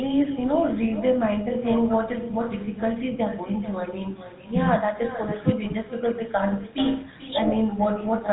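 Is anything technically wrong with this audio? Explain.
Yes, two problems run through the whole speech clip.

First, echo with no canceller: the far end is playing the call on a loudspeaker, its mic picks that up, and nothing strips it out. So every phrase comes back about 14 dB down, roughly 400 ms later, as a thin shadow.

Second, plainly audible GSM full-rate codec damage, which fits the old 13 kbps codec. It rebuilds the voice from a vocal-tract model driven by sparse, regularly spaced pulses, so you get that buzzy, gravelly texture, with nothing left above 4 kHz.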